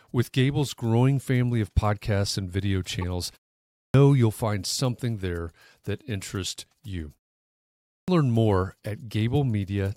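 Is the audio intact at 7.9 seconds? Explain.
No. At 7.9 s there's a clipped start after a pause: after about 0.65 s of silence, the output device is still waking, so 7.76 to 8.08 s (about 320 ms) is swallowed and the sound begins abruptly, missing its onset. Muted pauses would dip only the background and lose no speech.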